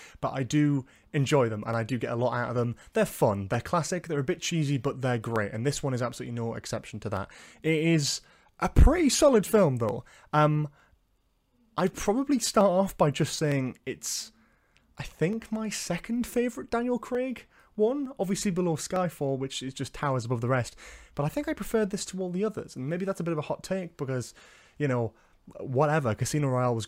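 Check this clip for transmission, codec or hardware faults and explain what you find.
One fault is present: clock drift buffer slips. Right after "but I do", at 0.83 s, regular clicks begin. They repeat every 0.91 s until 26.22 s, about thirty in all. The likely cause is two devices whose clocks differ by around 400 ppm. A buffer drifts and periodically drops or repeats a small block of samples, consistent with roughly 15 samples each time.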